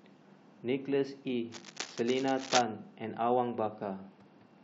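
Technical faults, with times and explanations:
1.51 to 2.61 s, cable scratch noise: For just over a second, dense, irregular bursts of crackling and rustling sit on top of the speech, at about 5 dB below it, so they are clearly heard. The cause is likely a worn cable, connector or control being moved. Its contact resistance flickers rapidly, and each change injects a ragged spurt of noise into the signal. That is why the noise sounds scratchy and uneven rather than a steady hiss.
3.73 s to the end, Bluetooth SBC bit pool drop: The speech suddenly loses its treble and takes on a gritty, grainy noise that lasts until the clip ends. This fits the SBC encoder cutting its bit pool from 31 to 10, around 77 kbps, to keep a congested link alive. With so few bits, the upper sub-bands get little or nothing, which dulls the top end. The remaining bands are coarsely quantised, which produces the grit.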